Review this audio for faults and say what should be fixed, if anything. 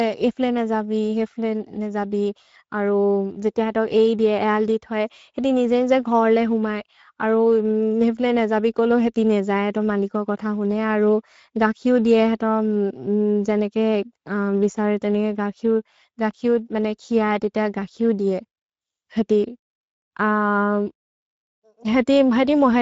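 Speex codec damage runs throughout: CELP coding short of excitation bits leaves the speech noisy and hoarse, with nothing above 7.6 kHz, consistent with a bitrate near 17 kbps. Encode at a higher Speex quality setting, or switch to a modern codec such as Opus.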